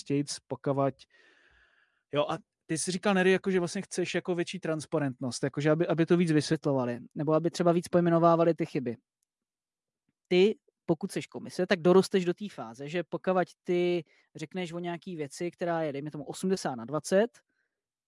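Speech that, from 6.53 s to the end, plays about 1.09 times fast and roughly 1.5 semitones high, which fits a wrong sample rate, 22 kHz audio played at 24 kHz. Unlike a pitch shift or time-stretch, speed and pitch rise together by the same ratio.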